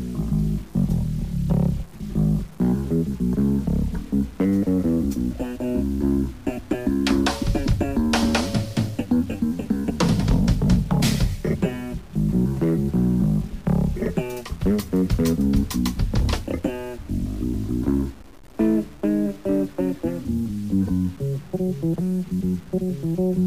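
From start to finish the sound carries a grainy, rough distortion that tracks the signal, turning quiet passages gritty and making the faintest parts sputter or fall silent. This is likely low bit depth without dither: the audio seems to have been truncated to about 7 bits, leaving error roughly 30 dB below the signal. On a waveform, low-level stretches look visibly stepped. A spectrogram shows signal-dependent hash spreading across the band.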